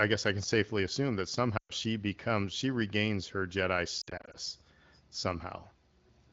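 Speech over AMR wideband with lost AMR speech frames. After "can safely assume that", 1.58 to 1.72 s drops to near silence as the decoder extends the last good frames with falling gain, and 4.02 to 4.36 s warbles with scattered short gaps.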